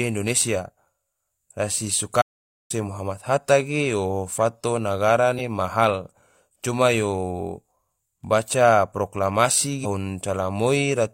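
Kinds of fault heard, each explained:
audio dropout to silence: The sound stops dead from 2.22 to 2.70 s. The gap is silent with no room tone. About 0.48 s of speech is gone. It resumes on "muhammad hatta ge yo". The input was likely cut while zeros kept being written.
damaged data in a compressed stream: Corrupted bytes make the decoder misread frames and hunt for the next valid header. Brief glitches result at 5.34 to 5.41 s, between "ge yo fato nagara" and "ma hal coma yo", and at 9.80 to 9.86 s, after "baca proklamasi".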